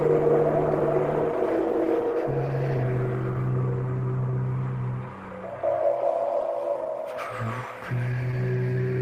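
Clock drift between sender and receiver runs through the whole recording. The sender's clock runs roughly 2 percent slower than the receiver's, so samples arrive a little too slowly and the jitter buffer keeps drifting toward empty. On a waveform this does not appear as one event. It shows up as small timing disturbances spread unevenly through the clip, with the edits that compensate for it visible as faint seams in the envelope.

From 2.08 s to 8.58 s there are repeated timing corrections. Because the sender is slow, the receiver keeps repeating short pieces to avoid running dry. Playback runs at about 99 percent speed and stretches the span by around 70 ms. These repeats sound like a slightly unsteady tempo and occasional tiny hiccups. On a spectrogram they appear as brief duplicated slices, irregularly spaced, where a pattern briefly recurs.

Between 2.78 s and 4.34 s there are scattered short gaps, about four of them. 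Each late or lost packet was patched by continuing the preceding sound, covering around 40 ms in total, with the longest patch near 15 ms. No audio is actually lost. Each patch is heard as a small tick or smear. On a spectrogram the patches appear as short, flattened stretches where the spectrum freezes, sometimes with a thin vertical line at the seam.

From 8.31 s to 8.34 s there is a short stall from a late packet. The buffer ran empty, the receiver held the last sound for 16 ms, and the delay rose by 16 ms before playback resumed at the same point. The held sound is heard as a slight buzz or dip. On a spectrogram it appears as a short band of frozen, smeared frequencies. On the waveform it shows as a small repeated cycle pattern with slightly lower amplitude.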